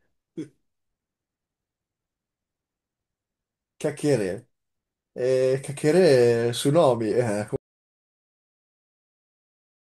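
At 7.56 s the speech just stops dead and never comes back: from there to the end, about 2.4 s, it's an audio dropout to silence, with no room tone at all. That flat nothing is the giveaway. The input was likely lost, maybe a device disconnecting, a link failing or a mute getting hit, while the recorder kept writing. Whatever was said in that stretch is simply gone.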